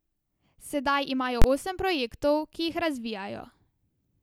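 At 1.42 s the speech is interrupted by a single violent bang lasting until about 1.44 s. This is invalid numbers at full scale: a calculation produced infinite or undefined values, and the output was forced to the maximum positive or negative level for a whole processing block. That span of about 23 ms fits a 1024-sample block. Unlike ordinary clipping, which flattens loud peaks of the signal itself, this replaces the audio entirely with a rigid flat plateau at one extreme value, far beyond the speech's peaks. Because the block is so short, its onset and release fuse into one bang rather than two distinct pops.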